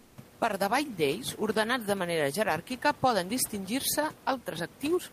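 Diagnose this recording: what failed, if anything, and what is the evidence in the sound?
Comfort noise in place of the background, codec stage, 0.03 to 0.15 s: room detail becomes steady, featureless hiss about 2 dB quieter, not a gate's silence; likely Opus DTX.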